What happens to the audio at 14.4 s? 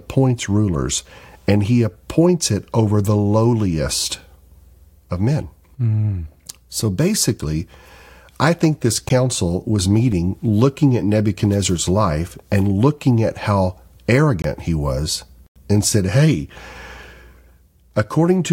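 At 14.42 s the speech drops into a block of digital silence lasting about 23 ms, ending at 14.44 s. The samples there are replaced by zeros, most likely because the output buffer was not filled in time, and the length fits a 1024-sample block. With no fade in or out, the waveform jumps to zero and back, and the gap is heard as a short hole.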